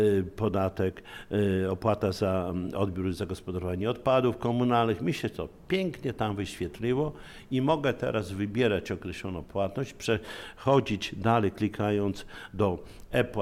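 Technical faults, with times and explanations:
No technical faults are present; the signal is continuous and stable across the whole recording.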